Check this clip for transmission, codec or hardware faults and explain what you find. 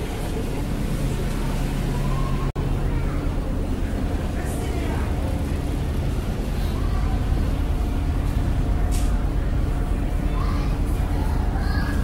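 One fault: a gap at a join of encoded pieces at 2.50 to 2.56 s. Separately encoded segments were spliced untrimmed, so encoder delay and end padding leave a roughly 52 ms break. The sound then resumes where it stopped.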